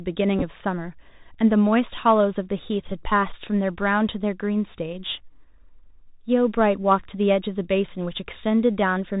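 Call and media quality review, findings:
Bluetooth CVSD headset codec, whole clip: narrowband headset link, consistent with 64 kbps CVSD. One-bit slope tracking with adaptive step; band stops near 4 kHz. Audible granular hiss under speech, scratchy s sounds, loud high content overloading the step and distorting.

Bluetooth headset packet repeated, 0.39 to 0.43 s: headset-to-phone packets dropped, last packet's bits decoded again. About 19 ms replaced across 30 ms, runs of around 7 ms, fitting roughly five lost packets. Short buzzy roughness near 267 Hz.

Bluetooth headset packet repeated, 2.88 to 2.92 s: same radio loss and packet repetition. About 19 ms spread over about 38 ms, longest runs near 7 ms. Brief buzz and ticks until clean packets resume.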